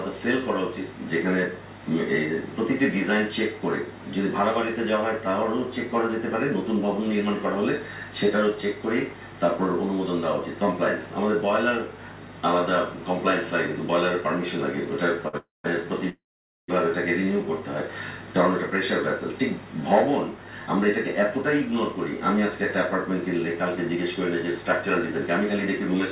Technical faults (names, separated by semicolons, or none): short stall from a late packet; call audio freeze; jitter buffer speed-up